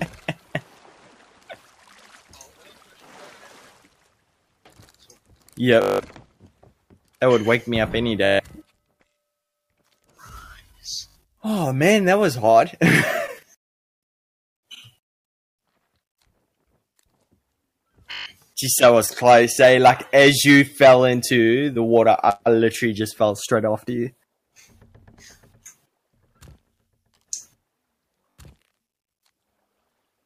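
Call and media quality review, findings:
Bluetooth stutter, five events: 5.82–6.00 s, 8.25–8.40 s, 11.08–11.16 s, 18.12–18.26 s, 28.22–28.38 s. Wireless link dropped or delayed packets; receiver replayed its last buffer to cover the gap. Heard as a buzzing, machine-gun repeat of one short slice, then a jump ahead where the audio resumes, skipping the missing 180 ms, 140 ms, 100 ms, 140 ms and 120 ms respectively. At 11.08 s and 28.22 s the losses come in scattered bursts across about 160 ms, longest unbroken run 81 ms, so the stutter breaks up rather than holding steady.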